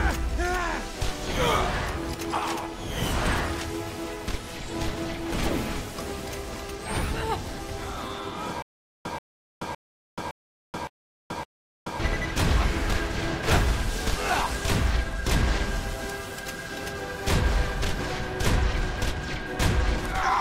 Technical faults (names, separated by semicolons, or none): stutter with silent gaps